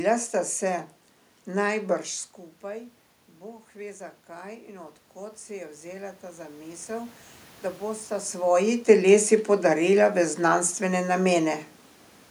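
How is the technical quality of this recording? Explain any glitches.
There is one glitch, an automatic gain rise. It runs from 2.62 to 7.23 s. Just before it, at around 2 s, the talker moves away and the voice drops by about 16 dB at the microphone. The automatic gain control hears the quieter input and slowly turns itself up by about 9 dB. Voice and room noise swell together over those four and a half seconds. The level creeps back rather than jumping. The talker shifts again near 8 s.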